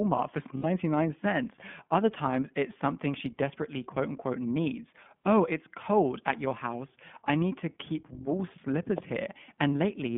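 The speech in this clip comes through the iLBC codec throughout. It is confined to a telephone band of roughly 150 Hz to 3.5 kHz, so a spectrogram shows an empty region above 3.5 kHz, and the coding roughness is plainly audible, with a slightly synthetic grain that fits the 15.2 kbps mode with 20 ms frames. Lost iLBC frames cause two brief gaps: a 60 ms loss around 0.58 to 0.66 s and a single dropped frame at 5.23 s. In each, the decoder repeats the last pitch cycle blended with noise, giving a short, held, buzzy vowel. On a spectrogram this looks like smeared, repeated harmonics, and on the waveform like a run of near-identical periods. Normal speech resumes immediately afterward because each iLBC frame is decoded independently.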